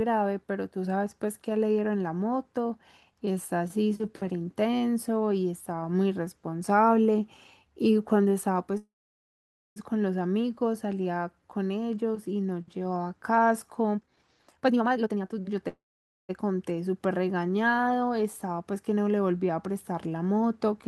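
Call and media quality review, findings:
Call audio freeze at 8.77–9.78 s: the speech stalls for about 1 s. A short fading buzz, then roughly 0.88 s of dead air, then it picks up right where it stopped. Nothing lost, just pushed back about 1 s. Likely packets held up and jitter buffer ran dry.

Call audio freeze at 15.68–16.31 s: same pattern, shorter. About 0.6 s stall, around 0.51 s of it silent, resumes intact, adds about 0.6 s delay. Likely another late-packet underrun.

Jitter buffer speed-up at 13.94–15.56 s: speech rushes at 154% speed, pitch unchanged. The receiver is snipping pitch-period slices back to back, dumping about a second of surplus buffered audio to cut delay.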